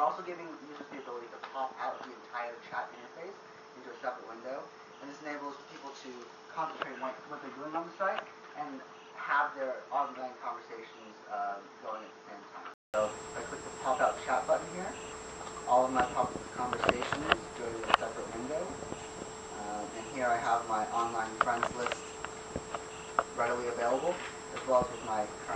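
From 0 to 12.94 s the recording system was likely taking its input from a poorer device, the fault known as input switched to a poorer device. That input passes nothing above 6.7 kHz, so the sound is dull and boxy, around 5 dB quieter, and has its own background noise roughly 40 dB below the signal. At 12.94 s a silence of 0.2 s marks the switch, after which the fuller band returns.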